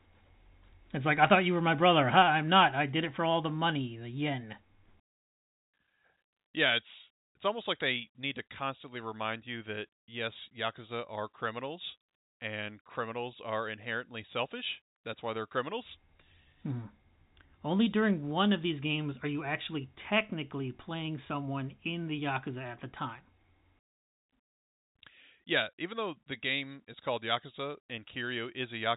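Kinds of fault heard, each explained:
Nothing here counts as a fault; it's speech carried over ordinary G.711 telephone coding, so the band stops around 3.8 kHz just as a phone line would.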